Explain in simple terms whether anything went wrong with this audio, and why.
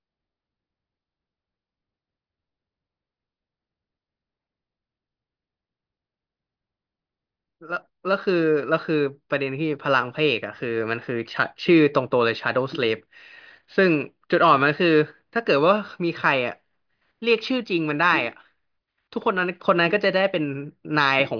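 Nothing went wrong here: the speech holds steady throughout, with no audible fault to report.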